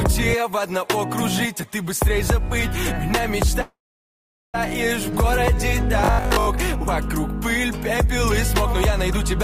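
A call audio freeze runs from 3.61 to 4.56 s. The last sound trails off briefly, then about 0.78 s of silence follows before the audio resumes where it stopped. This inserts roughly 0.93 s of delay without losing any content, most likely because delayed packets let the jitter buffer run dry. On a waveform this shows as a short decaying tail followed by a flat line. Between 6.05 and 6.49 s comes robotic sound from repeated short buffers. Most of that stretch is made of the same short chunk played over and over, locking the sound into a rigid 50 Hz buzz, which fits a likely 20 ms buffer being repeated while fresh audio arrived too slowly. A spectrogram would show evenly spaced horizontal harmonics at multiples of 50 Hz, and the waveform would show an identical pattern recurring every 20 ms.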